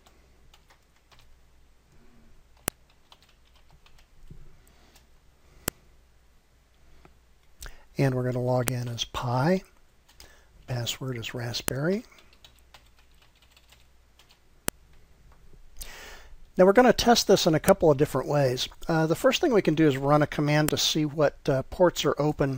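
Sharp clicks land at 2.68, 5.68, 8.68, 11.68, 14.68, 17.69 and 20.69 s, every 3 s. This is a file header played as audio. WAV pieces were joined with headers left in, so header bytes play as samples. Each gives a loud snap.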